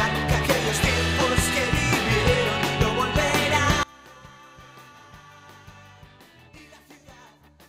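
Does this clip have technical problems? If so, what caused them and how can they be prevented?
Yes. From 3.83 s to the end, the sound drops by about 27 dB and turns faint, likely from one channel inverted: material shared by both channels cancels when they are summed to mono. The waveform envelope shrinks abruptly, and the spectrogram dims across the band. Checking polarity with a phase-correlation meter before any mono fold-down prevents this.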